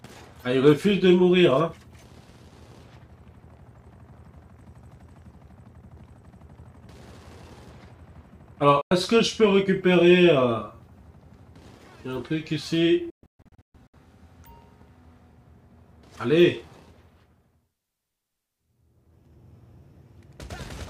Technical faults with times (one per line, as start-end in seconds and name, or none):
8.81-8.91 digital broadcast dropout
13.10-13.94 digital broadcast dropout